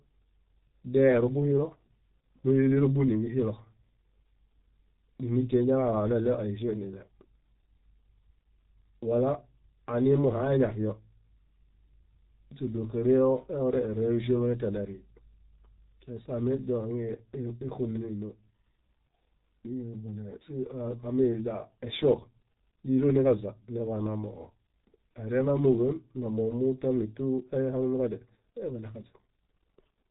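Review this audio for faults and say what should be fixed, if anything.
The speech sounds muffled and hoarse from start to finish, with nothing above 4 kHz and consonants smeared into one another. This is G.723.1 codec damage, and it is heavy. The codec packs the signal into 30 ms frames and updates its voice model slowly, so quick articulation is lost, and the thin, rough tone fits a rate of around 6 kbit/s. To prevent it, carry or record the speech through a wideband codec at a higher bitrate instead of G.723.1.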